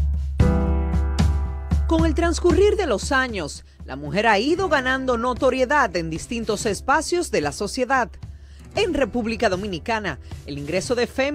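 Nothing technical stands out here at all; there's simply no fault to point to anywhere in the recording.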